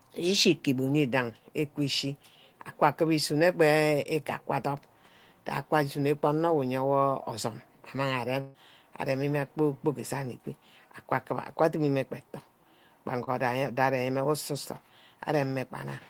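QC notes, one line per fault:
4.03–4.07 s and 13.24–13.29 s, short concealed packet loss: about 20 ms of speech never arrived each time, so the decoder patched the hole by carrying the previous sound forward (15 ms, then 28 ms) and blending back, which gives a quick smear or wobble.
8.41–8.56 s, burst of packet loss: 140 ms went missing in a row, and the receiver stretched the last sound across 132 ms, fading it down instead of going silent, so you get a held buzz or hiss before speech resumes further along.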